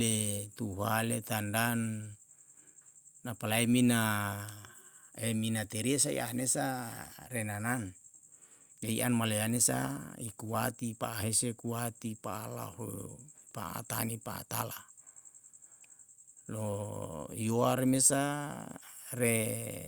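No technical faults can be heard anywhere in this speech recording; the signal stays continuous and intact throughout.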